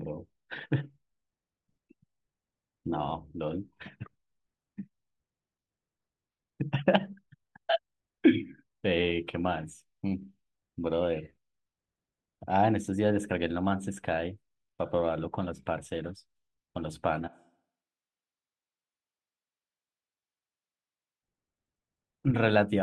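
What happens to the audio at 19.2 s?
From 17.29 to 21.21 s the speech turns hollow and bass-thin, likely a switch to a distant microphone: waveform drops roughly 5 dB, spectrogram loses low end, noise floor rises.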